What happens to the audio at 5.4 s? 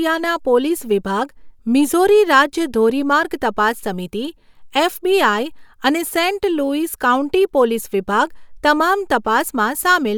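At 5.4 s the speech carries on cleanly, with no dropout, click, distortion or other fault at that moment.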